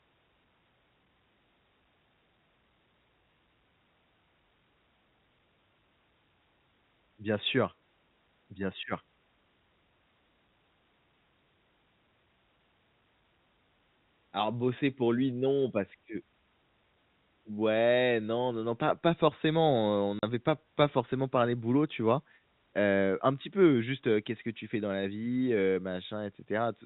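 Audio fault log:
20.19–20.23 s, packet loss filled with silence: about 40 ms of audio never arrived and the receiver inserted silence, which fits four 10 ms packets, cutting a hard-edged hole into the speech between "heu on" and "pas pas forcément parlé" over the band-limited G.711 telephone sound.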